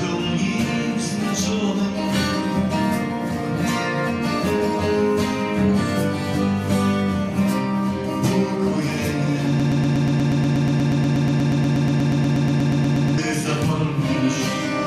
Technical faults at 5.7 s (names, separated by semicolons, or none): none